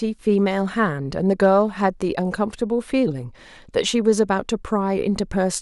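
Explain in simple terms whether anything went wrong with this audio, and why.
Hard clipping, from 1.44 to 1.46 seconds: for an instant the speech got slightly louder than the recording chain could handle, so the tops of its sound waves were sliced off flat. That flattening adds a brief, small crackle on that peak.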